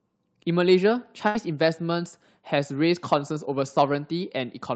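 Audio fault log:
1.27–1.38 s: burst of packet loss; consecutive packets dropped, so the receiver stretches the last sound, fading it over 72 ms, then resumes with 80 ms missing.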